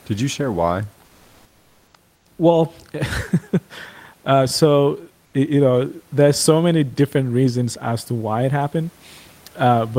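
Discontinuous transmission likely cut the sender's audio during pauses, and comfort noise in place of the background fills the gaps at 1.05–1.93 s, 2.15–2.25 s and 5.25–5.33 s. The real room noise gives way to flat synthetic hiss, about 2 dB louder in the first gap and about 2–3 dB quieter in the later two.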